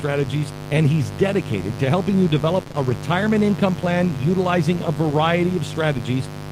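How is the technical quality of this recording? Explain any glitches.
The technical quality is poor, with two distinct problems.

A mains buzz runs through the whole recording. Switching spikes from a 50 Hz supply have leaked into the signal path, twice per cycle, spreading harmonics up into the kilohertz range. The result is a steady, raspy buzz sitting only roughly 10 dB under the speech.

Short concealed packet loss occurs three times in a row, from 2.63 to 2.68 s, 2.68 to 2.72 s and 2.72 to 2.76 s, right after "dedicated to helping you" and before "a retirement income plan". About 20 ms of audio failed to arrive each time. The decoder bridged each gap by extending the preceding sound before blending back, so this stretch comes across as a brief smeared wobble.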